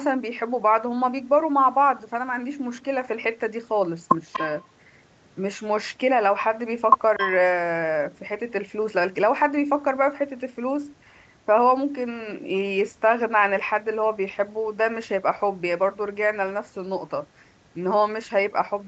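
At 4.33 to 4.43 s and again at 7.18 to 7.30 s, a delayed copy of the speech surfaces, trailing the original by 240 ms. The first scrap sits about 15 dB below the speech; the second is stronger, about 10 dB down. This is an echo leak, likely from a far end playing the call on a loudspeaker whose echo canceller let part of the returning signal through, so the talker hears fragments of themselves a quarter-second late.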